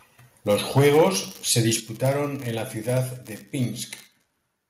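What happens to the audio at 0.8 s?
At 0.8 s the sound sits inside a stretch of microphone overload running from 0.51 to 1.04 s. The loudest peaks, driving about 5 dB past full scale, are flattened at the converter's ceiling, likely from input gain set too high. A small share of samples is cut, giving a harsh, crackly edge rather than the steady fuzz of saturation.

Right at 0.8 s the microphone volume is stepped down by about 3 dB in a single jump, likely the call software reacting to that clipping by lowering the device's input level. Sound and background drop together and instantly, which separates it from a compressor's gradual gain ride or a fade.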